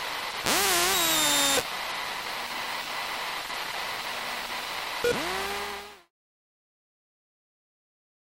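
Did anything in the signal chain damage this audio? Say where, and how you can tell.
No, the signal chain left this audio intact, and the only level change is a smooth editorial fade-out that begins around 5.5 s and completes at 6.11 s with no click or hard edge.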